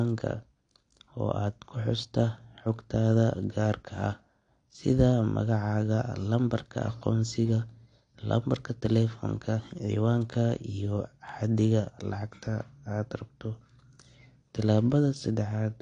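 From start to finish the speech is band-limited, with nothing above 9.7 kHz, and the coding damage is plainly audible. The top end sounds dull, sibilants turn fizzy and smeared, and sustained vowels carry a warble. This is likely AAC compression, with AAC-LC quantising each frame's spectrum so coarsely that it drops the high band, which fits a low bitrate around 32 kbps.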